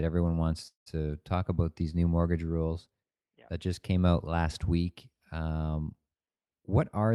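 A short speech recording stalls from 0.67 to 0.88 s: the last sound hangs on as a fading buzz, then drops into about 110 ms of silence before picking up exactly where it left off. This is a call audio freeze, likely from delayed packets draining the jitter buffer. The 188 ms of filler adds delay without losing anything. From 6.69 to 7.12 s, near the end, the talking sounds hurried at unchanged pitch, running at 109% speed. This is a jitter buffer speed-up: the receiver trimmed roughly 50 ms in small pitch-period slices to cut back the delay.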